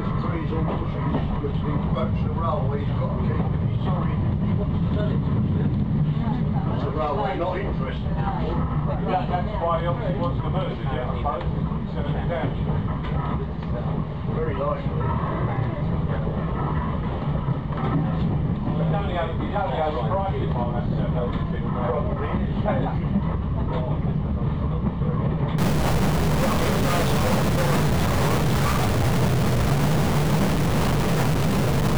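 From 25.58 s to the end, harsh buzzy distortion fills the sound and its pauses, likely a stuck bit weighing about -20 dBFS.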